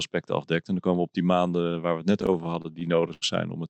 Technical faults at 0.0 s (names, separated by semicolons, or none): none